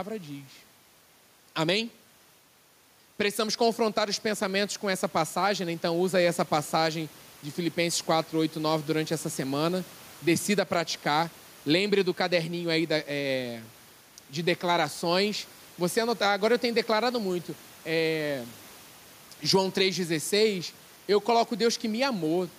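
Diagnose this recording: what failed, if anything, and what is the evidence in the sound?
Gain pumping throughout: the noise floor ducks roughly 10 dB under loud syllables, and the waveform looks flattened, likely from excess input gain driving a fast call-processing limiter.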